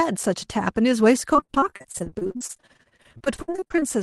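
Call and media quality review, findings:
Choppy, robotic speech, 1.33 to 3.84 s. Repeated packet loss: dozens of short dropouts, longest 60 ms, each bridged by the jitter buffer's concealment extending the last sound. About 37% of the stretch is filled this way, with about as much again missing. Path: Opus over the WebRTC call path, band-limited to 12 kHz.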